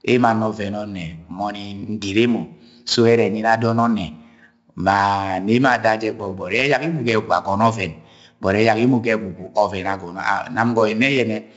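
Heavy 4-bit ADPCM compression runs throughout: gritty hiss rides every loud syllable, attacks smear, and nothing sounds above 7.7 kHz, which fits a 64 kbps stream.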